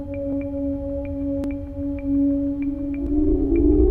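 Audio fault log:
0.33, 1.44, 3.07 s: dropped buffer (overrun). The sound jumps ahead about 50, 20 and 20 ms without silence, likely from samples overwritten before being read. The waveform shows abrupt steps, and the spectrogram shows thin vertical broadband lines.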